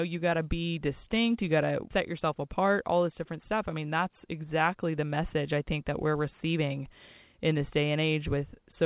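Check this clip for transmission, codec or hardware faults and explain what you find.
The clip, a speech recording carried over a call path, shows a clock mismatch between the two ends, heard as a continuous run of timing corrections.

Clock drift between sender and receiver runs through the whole clip. The sender's audio clock runs roughly four percent faster than the receiver's, so packets arrive slightly faster than they are played out and the jitter buffer keeps filling. To stop that backlog growing, the receiver has to discard small amounts of audio again and again. This does not show up as a single glitch. The timing never settles, and small irregularities recur at uneven spacing from start to finish.

Repeated timing corrections follow from that drift and run from 0.04 s to 8.85 s. Each correction cuts a short piece of audio, always in the same direction, which brings the playback rate to about 105 percent. 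Because the cuts are small and unevenly spaced, they come through as faint hiccups and a slightly hurried, uneven tempo rather than as clear dropouts. The speech runs a little quicker than natural, with occasional tiny jumps. The call codec's narrowband sound, with nothing above 4 kHz, is consistent with G.711 mu-law at 64 kbps.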